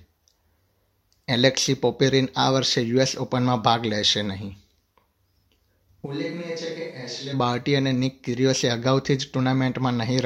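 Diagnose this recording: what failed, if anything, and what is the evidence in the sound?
From 6.07 s to 7.32 s the speech abruptly turns roomy and hollow, loses its low end, and falls by roughly 10 dB, with background room noise rising to around 30 dB below the speech, then snaps back just as suddenly. The likely cause is a switch to a distant microphone at the capture stage, after the close microphone's signal failed or went missing. A plain gain drop would keep the close, dry tone, and added reverb would not thin the bass or raise the noise floor.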